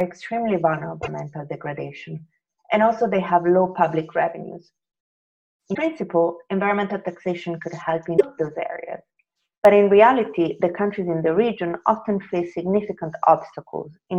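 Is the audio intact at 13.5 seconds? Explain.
Yes, at 13.5 seconds the audio plays through cleanly, with no dropout, click, distortion or other fault to be heard at that moment.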